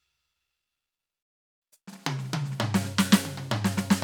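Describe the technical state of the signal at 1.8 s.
Time-compressed catch-up runs from 1.62 to 2.00 s: the player sheds backlog by cutting and cross-fading slivers, so the music rushes at double speed with unchanged pitch.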